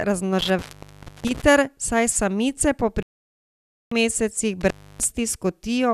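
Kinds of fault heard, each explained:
Intermittent contact: The speech cuts out abruptly with crackle at the edges of each gap, leaving faint hiss while the line is open. This happens twice, from 0.39 s to 1.42 s with about 0.63 s of actual opening, and from 4.61 s to 5.05 s with about 0.30 s open. The cause is a loose cable or plug whose contact briefly breaks and then reconnects, so the signal path itself is interrupted.
Digital broadcast dropout: The speech mutes cleanly from 3.03 s to 3.92 s, leaving roughly 0.89 s of missing audio before it resumes further along. Whatever was said during that span never arrives. This happens when the receiver loses the digital signal or rejects corrupted frames and mutes its output until valid frames return. A gap of this length points to a run of several dozen consecutive frames being lost.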